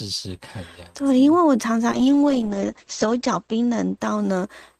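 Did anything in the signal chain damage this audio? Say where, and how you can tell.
Yes, a call bitrate drop at the codec stage from 1.93 s to the end of the speech. The top end is cut at 8 kHz and the sound turns coarse and watery, consistent with the encoder being throttled from roughly 48 kbps to 10 kbps after the bandwidth estimate fell.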